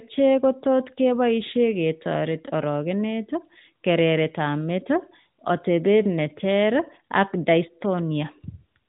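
No technical faults turn up anywhere in the speech, which carries the narrow, telephone-like bandwidth of an AMR narrowband mobile codec, with nothing above 4 kHz and only the light coding texture expected from one of that codec's higher bitrate modes.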